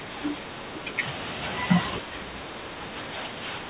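Speech suppressed in double talk: with both sides talking at once, the echo canceller likely could not separate this talker from loudspeaker echo. It turned the speech down by up to about 15 dB from 0.0 to 1.02 s, and by about 10 dB from 2.0 s to the end. All of this sits on the narrowband sound of the call path, which has nothing above 4 kHz and fits G.711 mu-law at 64 kbps.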